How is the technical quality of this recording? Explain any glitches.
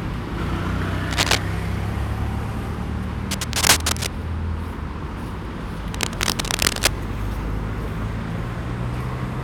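Three bursts of cable scratch noise mar the recording, from 1.09 to 1.38 s, 3.31 to 4.07 s and 5.90 to 6.96 s. Each is a dense, uneven rustle sitting about level with or slightly above the sound. Unlike steady hiss or isolated clicks, it comes in irregular bursts, likely from a worn cable or connector being moved.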